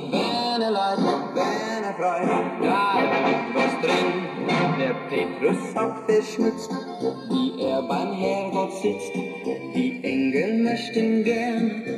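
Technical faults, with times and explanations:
Throughout, channels drifting apart: the inter-channel delay creeps to about half a millisecond, which points to separate clocks roughly 70 ppm apart; summed, sweeping comb notches give slow flanging.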